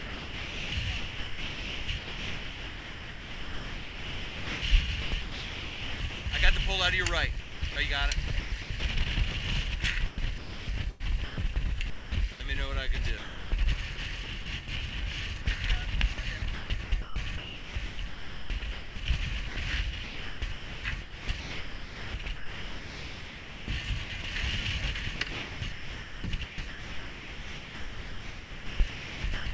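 From 0.00 to 6.26 s, 7.40 to 7.76 s, 8.28 to 12.40 s and 13.18 to 14.68 s, a voice detector likely kept toggling transmission, chopping the sound: repeated holes filled with comfort noise. At 15.42 to 15.46 s, sound was likely dropped by the voice detector when transmission stopped, leaving a 40 ms gap of comfort noise before the sound resumes. The same chopping returns from 16.14 to 18.96 s, 19.48 to 24.24 s and 25.16 to 29.46 s, all over the G.722 call path, which carries nothing above 8 kHz.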